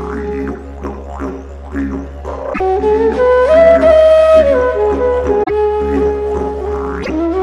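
Damaged data in a compressed stream occurs at 2.50–2.61 s, 5.42–5.50 s and 6.99–7.10 s, each break lasting roughly 0.08 to 0.11 s. Corrupted bytes make the decoder misread or reject frames and lose sync until it finds the next valid frame header, so the audio briefly breaks up.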